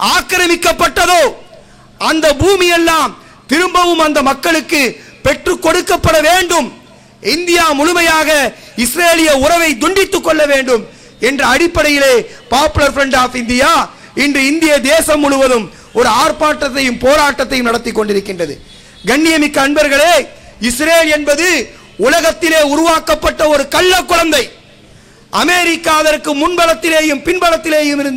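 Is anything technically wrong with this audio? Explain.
Yes, there is hard clipping across the whole clip. The signal is driven about 7 dB past what a stage in the chain can pass, so roughly three percent of samples hit the ceiling and are sliced flat. Those squared-off peaks add high harmonics, heard as a harsh crackling fuzz on the loudest moments.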